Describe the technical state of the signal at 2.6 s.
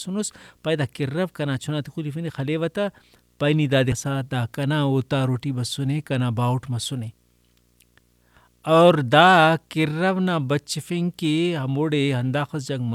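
At 2.6 s the speech carries video or display buzz, present across the whole clip: a screen or video cable couples its 60 Hz field-rate energy into the audio, giving a faint buzz with hash, far below the speech. A spectrogram shows steady horizontal lines at 60 Hz and its harmonics.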